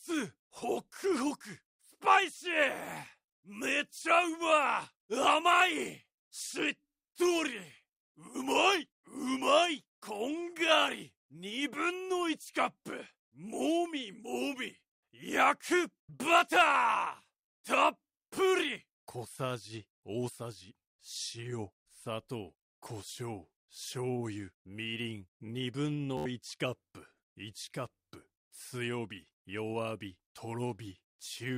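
Right around 26.17 s there's a Bluetooth stutter that runs to about 26.26 s. The link dropped or delayed a handful of packets, and rather than go silent, the receiver kept replaying its last short buffer. That gives you a quick buzzy, machine-gun repeat lasting about 80 ms. When data arrives again, the audio jumps ahead as though it had kept playing, so that stretch of sound is simply gone.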